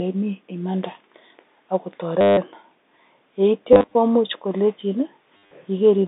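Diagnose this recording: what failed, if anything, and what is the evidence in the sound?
The failure is at the network stage: packet loss with the last packet repeated. From 2.21 to 2.37 s, 3.73 to 3.95 s and 5.37 to 5.51 s the speech breaks into a robotic stutter, most solid in the first burst where 160 ms went missing in one run. The receiver replayed the last packet until fresh ones arrived. Each replay seldom lines up with the pitch cycle, and the loops buzz at about 100 Hz, which points to 10 ms packets. A plain dropout would leave silence instead, and smoother concealment would fade rather than buzz. The G.711 telephone band of 250 Hz to 3.7 kHz carries the repeats unchanged.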